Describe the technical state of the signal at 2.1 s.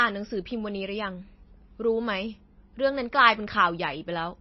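At 2.1 s you're hearing MP3 compression that runs through the whole clip: nothing above 5.8 kHz, watery swirling from dropped weak lines, likely a starved bitrate around 24 kbps.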